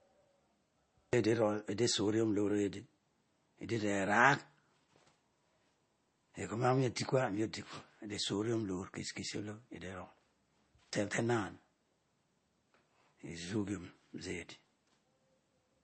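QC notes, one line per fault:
Throughout, MP3 compression: the speech sounds watery and swirly, with a plainly audible smear on consonant onsets, and nothing survives above about 8.3 kHz, so the top end is dull and s sounds turn thin and chirpy. This is likely heavy MP3 encoding, consistent with a bitrate around 32 kbps, where the encoder runs short of bits, lops off the treble at a fixed point and lets weak frequency lines flicker on and off between frames.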